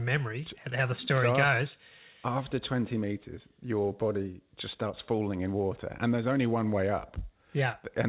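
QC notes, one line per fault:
No faults found in this speech clip.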